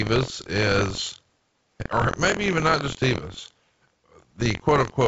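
Speech runs throughout with buffer tearing: a steady robotic buzz near 43.1 Hz, where roughly a tenth of each period repeats audio from about 50 ms earlier, which fits a 1024-sample buffer, heard alongside G.722 band-limiting with nothing above 7.7 kHz.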